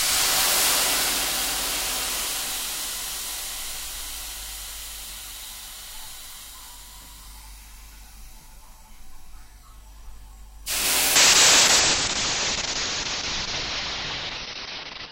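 Call bitrate drop in this everyday sound recording from 11.17 s to the end: the encoder is starved of bits, which fits a fall from 128 to 6 kbps. The sound turns coarse and watery, and its top end is cut from 20 kHz to 6 kHz.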